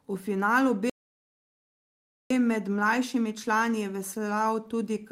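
A speech recording that cuts out abruptly in mid-flow at 0.90 s and stays completely silent for about 1.4 s, until 2.30 s, when the sound picks up again. It is a playback stall: the gap is a hard drop to nothing rather than a fade or a pause in the delivery. The likely cause is the player running short of data, or its audio thread being blocked, so no output was produced until it recovered.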